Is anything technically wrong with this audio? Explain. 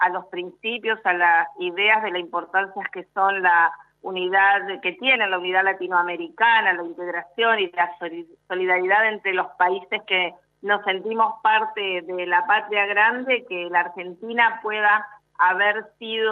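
No, nothing technically wrong can be heard anywhere in this audio.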